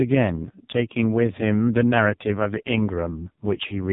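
Here's a speech recording that's been through the AMR narrowband mobile codec from start to finish, and it's badly squashed. Nothing gets through above 3.8 kHz, so it has that dull, boxed-in phone sound. The voice comes out buzzy and synthetic because the codec rebuilds it from a vocal-tract model fed with just a few pulses per frame. That heavy damage suggests one of AMR-NB's lowest modes, something like 4.75 kbps.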